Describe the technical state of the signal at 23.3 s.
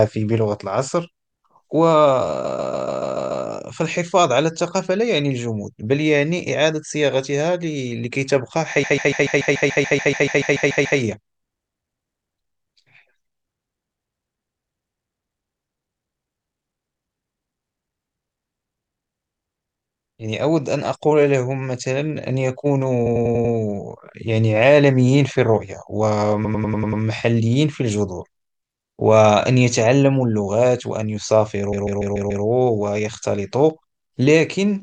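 Repeated frames occur from 23.05 to 23.53 s. A short block of compressed audio, about 96 ms long, which fits a run of four compressed frames, was written or sent more than once, so the decoder plays the same stretch of speech five extra times in a row. It is heard as a rapid stutter repeating one fragment, and the duplicated material pushes everything after it about 0.48 s later than it should be.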